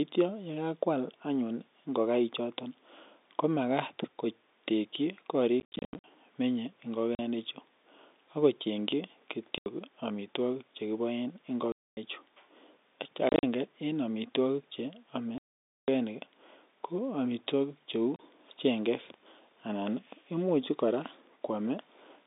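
Packet loss filled with silence breaks this telephone-band speech recording at 5.6–6.04 s, 7.15 s, 9.58 s, 11.72–11.97 s, 13.29–13.43 s, 15.38–15.88 s and 18.16 s. Missing packets are replaced by dead air with hard edges. The hole lengths are all multiples of 10 ms, which fits 10 ms packets. The first and fifth bursts are scattered runs, up to 80 ms and 40 ms long. The half-second gap at 15.38 s is the longest. The G.711 mu-law line limits the sound to roughly 250 Hz to 3.7 kHz.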